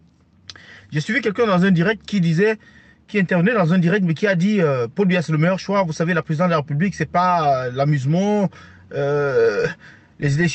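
Gain pumping runs throughout: the gain swings by around 5 dB, likely from gain set far too high with a fast limiter pulling it down on every loud sound. A noise gate would instead silence the gaps. The call path's audio is limited to about 8 kHz.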